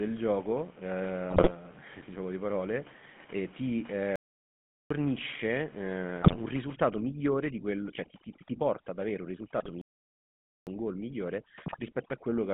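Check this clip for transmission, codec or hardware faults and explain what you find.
Four faults are present: GSM full-rate coding throughout, bursts of GSM bit errors, two playback stalls, and overdone noise removal in the second half.

The GSM full-rate codec colours the whole clip. Its sound fits the 13 kbps GSM full-rate coder. The speech is confined to a line band of about 150 Hz to 3.4 kHz, and the codec damage is plainly audible. The coder represents the vocal tract as a filter and excites it with a sparse, regularly spaced pulse train, discarding most excitation detail. The result is a buzzy, gravelly roughness over all the speech, with no top end.

GSM bit errors appear at 1.30–1.51 s, 6.22–6.37 s, 9.58–9.71 s and 11.66–11.80 s. Each burst corrupts a short run of decoder frames, consistent with an error rate of a few percent on a weak radio link. When flipped bits land in the filter, pitch or gain parameters, the decoder reconstructs the wrong spectrum or level for that frame. 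The speech breaks into squawks, pops and gargling for a fraction of a second each time.

A playback stall cuts the audio to silence from 4.16 s to 4.90 s, just after "di parole eh ti", for about 0.75 s. A second stall runs from 9.81 s to 10.67 s, about 0.85 s. The likely cause is the player running short of buffered data, or its output thread being blocked, so nothing reaches the output until it recovers. Speech halts mid-flow and then resumes.

Overdone noise removal runs from 6.54 s to the end of the clip. The room noise, sitting about 23 dB below the speech, is real background in the recording. A suppressor set far too aggressively treats it by pulling individual frequency bands down hard wherever they approach its noise estimate, and weaker speech components are removed along with them. The background drops away and breaks up into twinkling, warbling specks.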